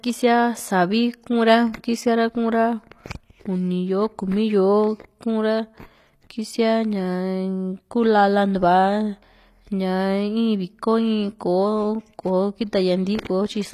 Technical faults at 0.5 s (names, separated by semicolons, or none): HE-AAC compression